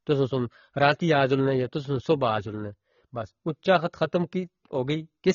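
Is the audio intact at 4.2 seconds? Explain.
No. At 4.2 seconds the speech carries the same damage heard through the whole clip, most likely AAC compression. Nothing sounds above about 6.9 kHz, and the sibilants and vowels have a dull, smeared, warbling texture, which fits AAC-LC at a low bitrate around 24 kbps quantising each frame's spectrum coarsely. A simple low-pass filter would also remove the top octave, but it would leave what remains clean rather than fizzy and swirling.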